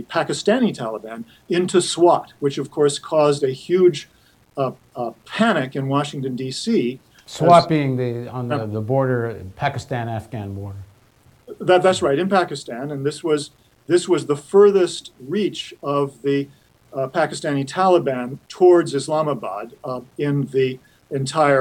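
Throughout, grain about 40 dB below the signal is likely low bit depth without dither, fitting 9-bit rounding; waveforms look stepped, spectrogram noise follows the signal.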